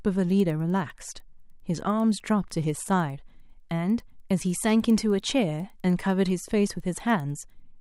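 From 0.30 s to 7.60 s the speech carries a steady tick at 10 Hz, the mark of a resampler restarted on every block. Each 100 ms block was converted in isolation, likely from 24 kHz up to 48 kHz, so its edges were computed without the true neighbouring samples and each boundary picks up a small error. Unlike buffer dropouts, nothing is missing and the spacing never varies, and unlike a hum, the ticks disappear in pauses.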